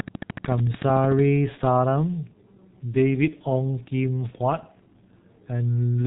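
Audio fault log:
throughout G.723.1 codec: the speech has been through heavy low-rate coding at 6.3 kbit/s, so nothing survives above 3.8 kHz and consonants smear into a muffled, hoarse texture. A spectrogram shows a hard ceiling at 3.8 kHz with coarse, blocky frames, and harmonics that change only sluggishly over time.
0.00–1.20 s train of clicks: a regular run of near-identical pulses at 13.5 per second, roughly fifteen in all, sits about 10 dB above the speech and ticks audibly even in gaps. This is likely interference or a faltering interface. The waveform shows evenly spaced spikes, and the spectrogram shows thin vertical broadband lines.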